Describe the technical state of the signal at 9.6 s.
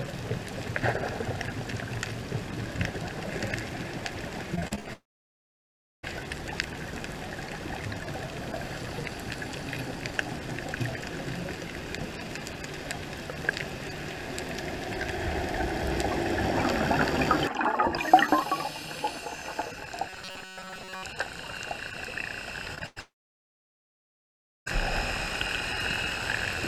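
At 9.6 s the signal is intact, with no dropout, click, distortion or other technical fault to be heard.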